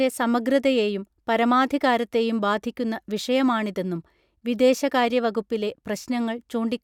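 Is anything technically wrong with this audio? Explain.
No, nothing is technically wrong with this audio.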